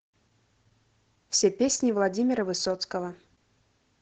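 From start to finish the speech sounds muffled and a little hoarse, with a faintly robotic edge and nothing of the airy top end. That is Opus voice compression running its SILK linear-prediction coder at a low rate, which fits around 12 kbps. The band is held to wideband, so nothing above about 8 kHz survives. The excitation is coded coarsely in 20 ms frames, which roughens the voice throughout.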